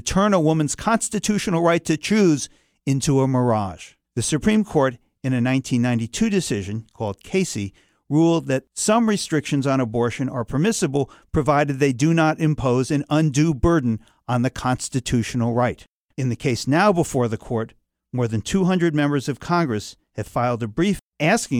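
No technical faults are audible anywhere in the speech.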